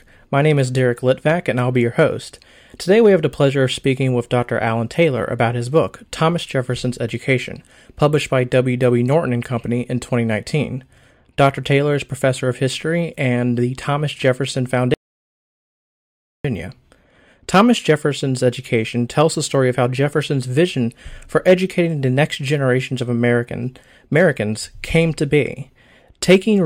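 At 14.94 s the speech cuts off abruptly into silence, with no room tone, and resumes mid-flow at 16.45 s, so about 1.5 s of material is simply gone. This audio dropout to silence likely came from a lost input, such as a disconnected device or failed link, while the recorder kept writing silence.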